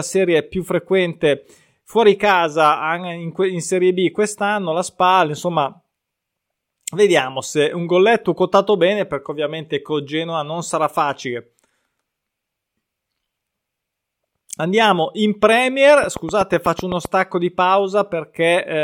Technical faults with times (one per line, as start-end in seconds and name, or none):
16.04-17.06 train of clicks